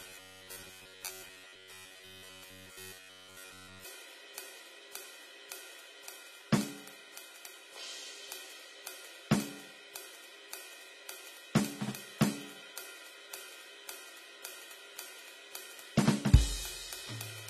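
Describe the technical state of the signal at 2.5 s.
At 2.5 s the music is inside a stretch of robotic sound from repeated short buffers, running from 0.01 s to 3.85 s. A fixed buzz near 93.8 Hz is imposed on the music. This likely comes from a short chunk of about 10.7 ms being replayed, with most of the real audio skipped.

AAC compression damage is also plainly audible here, as it is throughout. Nothing sounds above 14.1 kHz, so the top end is dull and smeared. The likely cause is low-bitrate AAC-LC coding, which fits about 32 kbps.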